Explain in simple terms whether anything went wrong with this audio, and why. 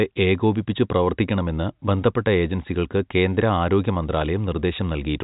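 Nothing went wrong with this speech recording. It has the narrower sound of ordinary G.711 telephone coding, with nothing above about 3.8 kHz, which is how a standard phone line is meant to sound.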